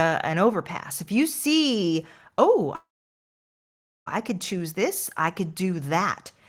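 After "if you see oh" at 2.75 s, a call audio freeze fades into about 1.2 s of silence, then picks up with "I could" at 4.08 s. It's likely a drained jitter buffer, with nothing lost.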